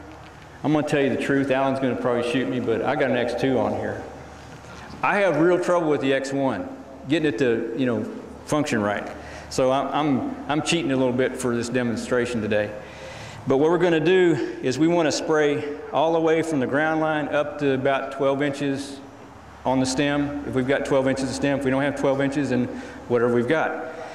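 There are no technical faults to describe in this audio.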